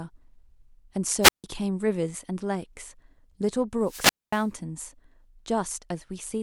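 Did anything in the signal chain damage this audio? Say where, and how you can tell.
Yes, at the wireless link ahead of the converter. Twice the speech gives way to a brief swell of hiss and then near silence before returning: from 1.21 to 1.44 s, with a hole of 154 ms, and from 3.81 to 4.51 s, with a longer hole of 235 ms. That hiss-then-mute shape is a wireless microphone squelch dropout. The FM carrier faded, noise rose as it weakened, and the receiver's squelch muted the output until the signal recovered.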